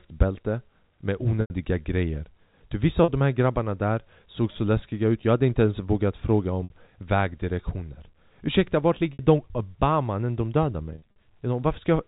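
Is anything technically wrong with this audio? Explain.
Yes. The speech has packet loss with pitch repetition at 1.41–1.50 s (90 ms), 3.04–3.08 s just after "grejer du vissa", 6.64–6.70 s after "inte ens vågat fråga", 9.13–9.19 s, and 10.94–11.14 s after "när de dödar", where short losses are scattered over about 220 ms, the longest run 50 ms. The receiver fills each gap by looping the last pitch period, so the speech briefly freezes into a held, buzzy tone that fades out. On a waveform this shows as identical repeating cycles with a decaying envelope. On a spectrogram it shows as flat, unchanging harmonic lines where the pitch should move. The G.711 telephone band underneath can be heard as normal narrowband speech.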